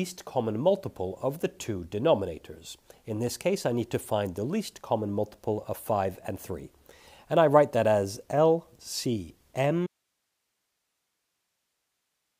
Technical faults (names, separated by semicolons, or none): audio dropout to a faint residue